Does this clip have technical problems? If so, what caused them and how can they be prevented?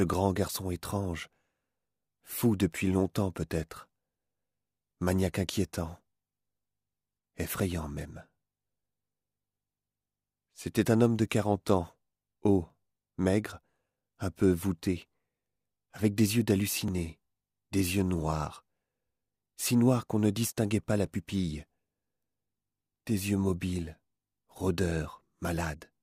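Yes. Two independently clocked devices likely drifted apart, causing clock drift buffer slips: a regular click every 4.19 s from 0.13 to 25.25 s, about seven in all. Locking both devices to one shared clock, or resampling between them, prevents this.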